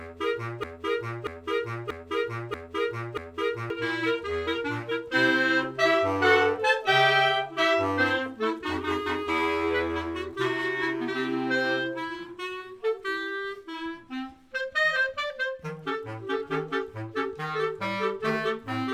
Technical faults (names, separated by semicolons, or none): broken-record loop